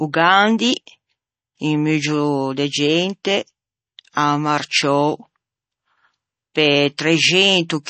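Throughout, the speech carries plainly audible MP3 compression, likely from a low-bitrate encode, one consistent with about 32 kbps. Nothing sounds above 8.3 kHz, and a spectrogram shows a hard ceiling there, with sparse, flickering high bands that give the speech its watery, swirly edge and smeared consonants.

From 0.12 s to 7.86 s, clock slip clicks run steadily, likely from two unsynchronised clocks differing by roughly 500 ppm, dropping or repeating one sample each time. They arrive about every 40 ms, some 200 in all, as a soft rattle riding on the voice. The waveform shows tiny regular discontinuities, and the spectrogram shows faint evenly spaced vertical lines.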